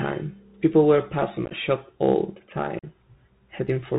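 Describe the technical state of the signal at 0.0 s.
At 0.0 s the speech is already passing through a Bluetooth CVSD headset codec, and it stays that way for the whole clip. CVSD sends one bit per sample, stepping the waveform up or down with an adapting step size. That fits a 64 kbps stream. The band stops near 4 kHz, so the sound is narrow and muffled. Loud, bright sounds outrun the step and distort. S sounds turn scratchy, and a granular hiss sits beneath.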